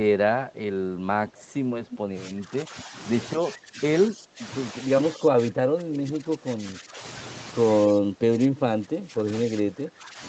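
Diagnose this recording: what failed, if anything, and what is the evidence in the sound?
Echo leak, at the call-processing stage: at 1.33–1.51 s and again at 1.88–1.99 s a delayed copy of the speech comes back 226 ms after the original. It is faint at first, about 30 dB below the speech, then stronger at about 15 dB below. On a spectrogram it shows as a weak repeat of the harmonic pattern shifted about 0.23 s later. On the waveform it appears as small ghost bursts trailing the main energy. The likely cause is an echo canceller that left part of a loudspeaker signal in the microphone feed.

Speech suppressed in double talk, also call processing: the speech level dips by about 15 to 20 dB at 2.24–2.94 s, 3.38–3.81 s, 4.08–4.45 s, 5.12–7.04 s, 7.92–9.28 s and 9.45–10.21 s. The longest dip lasts roughly two seconds. The waveform envelope is pinched down in blocks, and on the spectrogram the speech energy fades across the band during each span. 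The likely mechanism is the suppressor being unable to separate the local talker from echo while both sides spoke, so it attenuated everything.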